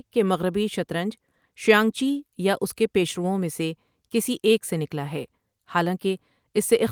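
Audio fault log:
No audible faults anywhere in this speech recording.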